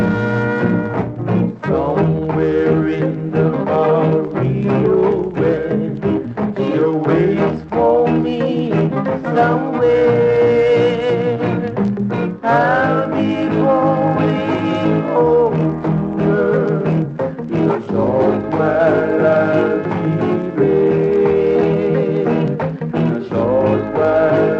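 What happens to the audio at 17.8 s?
Nothing goes wrong at 17.8 s. The audio there passes intact through the call path, with its top end limited to about 8 kHz by the codec.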